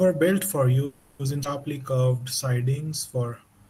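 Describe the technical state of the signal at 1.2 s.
At 1.2 s the signal is at the tail of a call audio freeze running from 0.85 to 1.22 s, starting right after "built for". For about 340 ms the last sound is stretched into a buzzy, hissy continuation instead of real speech, with no dead silence. The likely cause is packets held up in transit until the jitter buffer ran dry. When speech resumes it picks up where it stopped, so nothing is lost, but everything after runs about 340 ms late.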